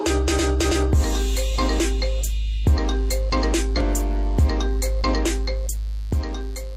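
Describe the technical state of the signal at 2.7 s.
At 2.7 s, a mains buzz has just set in: from 2.66 s to the end at 6.77 s, switching spikes from a 50 Hz supply leak into the signal twice per cycle, stacking harmonics into the kilohertz range. The result is a steady, raspy buzz sitting well below the audio.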